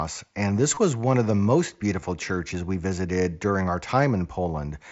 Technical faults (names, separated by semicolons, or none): concealed Bluetooth headset packet loss